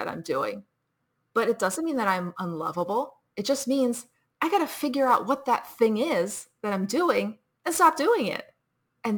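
All the way through the speech there's sample clock jitter: the converter's clock wobbles by several microseconds, so samples land slightly early or late. That error rides on the signal, roughly 25 dB down, as a grainy hiss that swells on loud, bright syllables and drops away in pauses.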